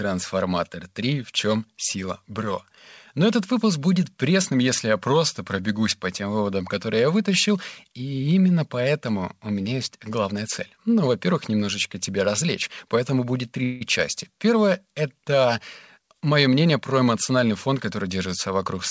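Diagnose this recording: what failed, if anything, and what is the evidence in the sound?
Right after "тебя развлечь поэтому будет", at 13.64 s, there's a short buzzy smear lasting about 0.17 s before the speech picks up where it left off with nothing lost. That's likely a call audio freeze in the network and jitter buffer stage: packets stalled and the receiver stretched the last sound until they arrived.

From 15.99 to 18.05 s the speech runs about 9% fast at unchanged pitch, a bit hurried. That's a jitter buffer speed-up in call processing: the buffer held more than its target, so it snipped pitch-period-sized pieces, around a fifth of a second in total.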